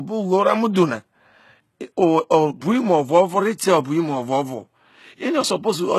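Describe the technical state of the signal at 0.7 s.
A smear of hiss creeps in just ahead of an attack in the speech, from 0.73 to 0.76 s, so the onset sounds softened rather than crisp. This is pre-echo: the codec spreads its quantisation noise across a whole transform block, and because the sharp onset lands late in that block, noise sized for the loud part also fills the 25 ms of near-silence before it, where nothing masks it.

Around that moment, and across the whole clip, the upper range has a gritty, metallic edge on sibilants, with nothing present above 12.3 kHz. That is the sound of HE-AAC compression, whose damage is plainly audible. Only the lower spectrum is coded directly; the treble is rebuilt by copying lower bands upward under a coarse envelope, so its harmonics don't line up with the real ones. The heavy artefacts point to a low bitrate, likely around 16 kbps.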